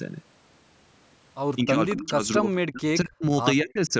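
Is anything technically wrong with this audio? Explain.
Yes. The speech drops out in three stretches: 1.65 to 2.51 s, 2.71 to 3.32 s and 3.62 to 3.93 s. The level sinks by roughly 20, 40 and 25 dB, in broken pieces. This is speech suppressed in double talk, likely from an echo canceller mistaking the near talker for loudspeaker echo while the far side spoke.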